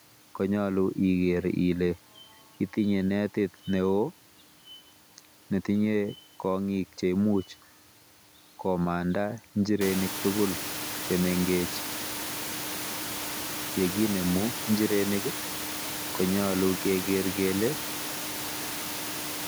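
No system faults are present in this speech, though the background noise of the room steps up by about 23 dB around the 10 s mark and then sits roughly 10 dB below the speech, which is part of the recording itself.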